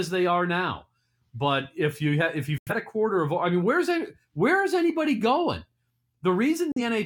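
At 2.58 to 2.72 s, and again at 6.72 to 6.82 s, the speech mutes in a digital broadcast dropout. The receiver lost valid frames and silenced output, with a 3 ms fade. The clean, complete silence, with no smeared filler or wobble, separates this from packet-loss concealment or tape dropout.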